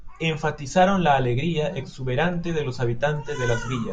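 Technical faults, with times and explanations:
No technical faults heard in this speech recording.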